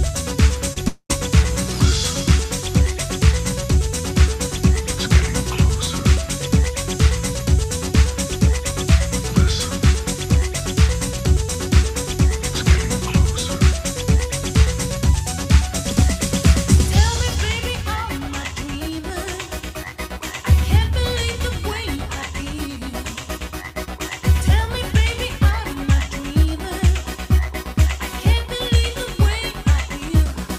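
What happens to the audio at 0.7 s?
A short concealed packet loss occurs from 0.73 to 0.78 s. About 20 ms of audio never arrived, and the receiver filled the gap by extending the preceding sound before blending back. It is heard as a brief smear or wobble. On a spectrogram, the frequency bands run flat and unchanging through that span.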